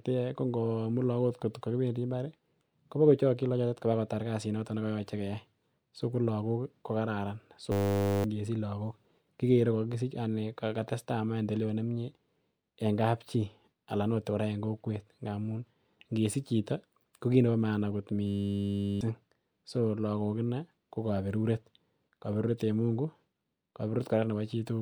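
A steady 100 Hz buzz replaces the speech from 7.72 to 8.24 s and 18.27 to 19.01 s: a system hang loop, replaying a 10 ms buffer, losing roughly half and seven-tenths of a second.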